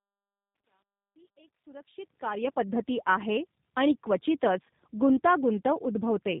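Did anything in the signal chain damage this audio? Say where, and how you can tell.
Yes. The damage sits in the codec stage and lasts the whole clip. It is tandem speech coding. The speech sounds rough, muffled and warbly, with nothing above 3.8 kHz. That fits AMR-NB, then G.711, then G.729A. Each coder re-encodes the previous one's errors, so they stack.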